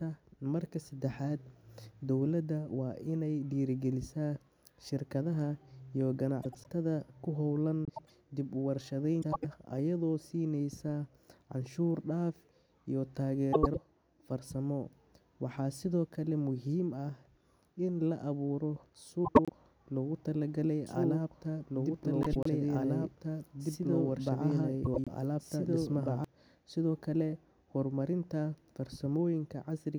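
At 6.42, 7.85, 9.22, 13.53, 19.25, 22.23 and 24.84 s, frames out of order swap two adjacent blocks of about 104.5 ms each, which fits runs of four frames. Each stretch sounds like a garbled flutter, and unlike a dropout, no time is lost. From 20.86 to 26.24 s, a doubled audio track adds a second copy of the speech, about as loud as the original and roughly two seconds behind it. It likely comes from a slower second capture path. Unlike room echo, the copy has no decay, and it starts and stops abruptly.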